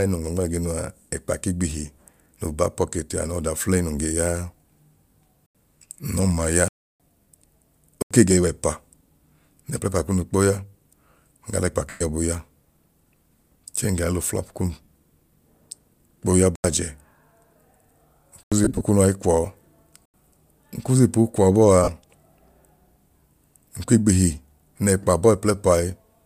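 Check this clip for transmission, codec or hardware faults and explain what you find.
Two kinds of fault are present in this speech clip: repeated blocks of digital silence and several bursts of lost LE Audio frames.

Blocks of digital silence occur at 5.46, 6.68 to 7.00, 8.02, 16.56, 18.43 and 20.05 s. The playback buffer most likely wasn't filled in time, so zeros went out instead. Most gaps last about 85 ms, which fits a 4096-sample buffer; the one at 6.68 s runs 315 ms. Each cuts off abruptly and returns abruptly, leaving a short hole in the speech.

Lost LE Audio frames occur at 11.89 to 12.01 s (112.5 ms), 14.83 s (45 ms), 18.64 to 18.81 s and 21.84 s (37.5 ms). Dropped Bluetooth packets forced the LC3 decoder to reuse the last spectrum with randomised phase, so the speech briefly smears into a hissy, tonal blur. The 18.64 s burst is scattered over 165 ms, with no single run much beyond 40 ms.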